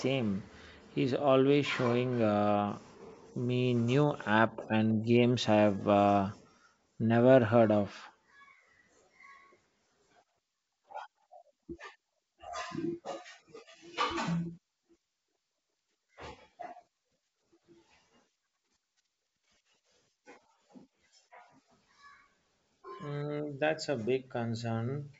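Nothing stood out on listening to this speech, which carries the usual sound of G.722 wideband telephone coding with its content stopping a little below 8 kHz.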